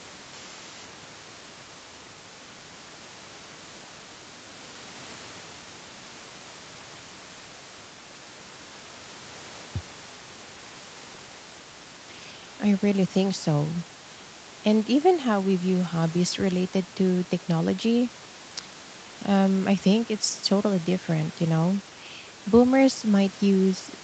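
Nothing stood out on listening to this speech recording, which carries only the ordinary character of a call, with its top end stopping around 8 kHz and a faint room background sitting about 23 dB below the speech.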